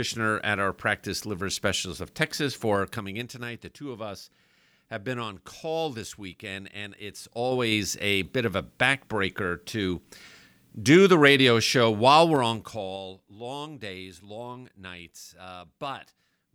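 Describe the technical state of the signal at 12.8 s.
Zipper noise runs from 12.26 to 13.33 s, between "the radio show while" and "days long nights". The level drops in unsmoothed 3 dB steps about five times a second, roughly 15 dB overall, each jump ticking. The waveform envelope forms a staircase, with thin vertical broadband lines on a spectrogram.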